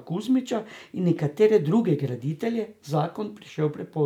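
No audible technical faults in this recording.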